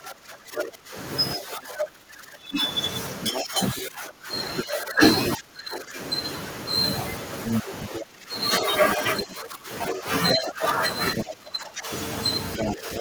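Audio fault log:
0.0–6.0 s, speech suppressed in double talk: the echo canceller likely mistook the overlapping talk for echo and turned the talker down, causing dips of around 20 dB over roughly four seconds.
3.22–5.28 s, other side's voice leaking through: residual loudspeaker echo was likely left in the microphone signal, so a second voice sits about 5 dB below the talker.
7.45–11.25 s, other side's voice leaking through: the echo canceller likely failed to remove the far-end playback, letting the second voice come through at roughly the talker's own level.
7.63–13.0 s, speech suppressed in double talk: with both sides talking, the canceller likely attenuated the talker too, producing drops of around 15 dB across about three seconds.
12.58–13.0 s, other side's voice leaking through: leftover loudspeaker echo likely escaped cancellation again, briefly adding the second voice about 5 dB beneath the talker.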